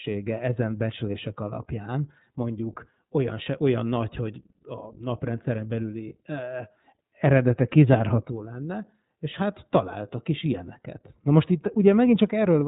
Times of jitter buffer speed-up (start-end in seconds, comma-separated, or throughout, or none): none